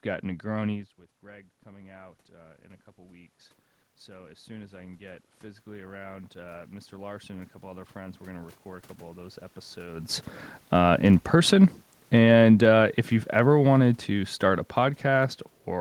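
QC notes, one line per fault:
1.21–3.41 s and 4.05–10.3 s, automatic gain rising. Around 0.5 s the talker moves away, and the level at the microphone drops by about 17 dB. The gain control responds slowly. It lifts its gain by about 4 dB over the first span, then by about 13 dB over the second. The voice and the room noise swell together, since the whole signal is being raised rather than the voice alone.
10.8–15.46 s, automatic gain falling. Near 10.0 s the talker moves, and the input is too loud for the gain, which has been pushed up. The sound is too loud at first. The gain control then lowers its gain by about 7 dB over several seconds. The voice and the room noise sink together, so the level settles gradually instead of dropping at once.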